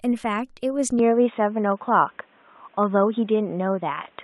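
At 0.99 s the speech turns dull and boxy and stays that way to the end. There is no gap at the change. A faint new hiss sits well below the speech, and the level shifts slightly. The likely cause is an input switched to a poorer device.

At 1.72 s, 2.83 s and 3.67 s there are single sharp clicks. Each is a brief tick and takes away no audible sound. These are likely dropped samples. Only a handful go missing each time, so the waveform jumps abruptly.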